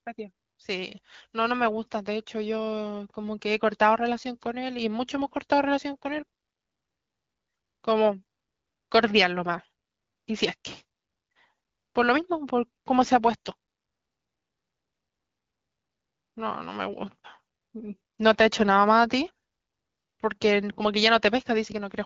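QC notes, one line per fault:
The speech carries the band-limited character of AMR wideband (HD Voice) coding at 12.65 kbit/s, a rate that fits its clear, intelligible sound, and no faults stand out in the signal.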